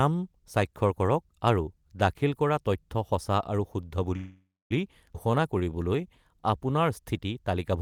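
A speech clip with three network-timing faults close together. Right after "তথ্য সঁচা আৰু শুদ্ধ", a call audio freeze runs from 4.16 to 4.72 s. The last sound is stretched into a fading buzz that ends in about 0.25 s of silence, and then speech resumes exactly where it stopped. The likely cause is delayed packets draining the jitter buffer. Nothing is lost, which separates it from a skip. At 5.14 s a skip ahead does the opposite. Playback jumps forward with almost no gap, and roughly 150 ms of speech is cut out, so the sounds on either side are butted together instead of being separated by a pause. From 5.27 to 6.51 s comes a jitter buffer slow-down. Repeated pitch periods add 126 ms, so speech plays at 91% speed with stretched sounds. The pitch stays unchanged, which sets this apart from a tape-style slowdown.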